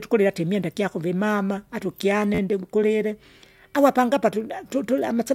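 At 2.35 s the speech catches in a repeated buffer, lasting until 2.39 s. New audio failed to reach the device in time, so it replayed the last block it had. The same slice of about 12 ms sounds four extra times, which fits a 512-sample buffer. Each repeat meets the next with a hard join. At this size the loops blur into a brief buzz near 86 Hz rather than a stutter. Little or no audio seems lost.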